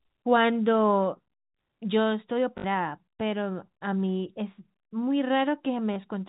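Speech carried over G.711 telephone coding, with nothing above 4 kHz, has packet loss with the last packet repeated at 2.58–2.64 s (60 ms) and 5.94 s. The run at 2.58 s is a brief robotic stutter that buzzes at about 50 Hz, and the single repeat at 5.94 s is a small blip. On the waveform it shows as identical copied blocks.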